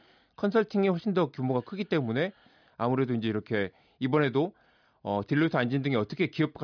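No technical faults heard.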